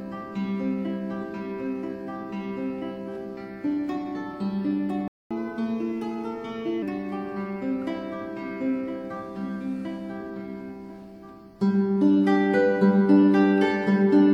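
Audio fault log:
5.08–5.31 s playback stall: the sound halts mid-flow for about 0.23 s of silence, then resumes exactly where it stopped. That points to the player likely running out of data. Unlike a dropout or edit, nothing is skipped.
5.31–6.82 s catch-up at higher speed: straight after the stall the audio runs 1.15 times fast, pitch rising about two semitones, as the backlog is resampled to recover lost time. Speed and pitch move together and return to normal, unlike a fixed pitch shift.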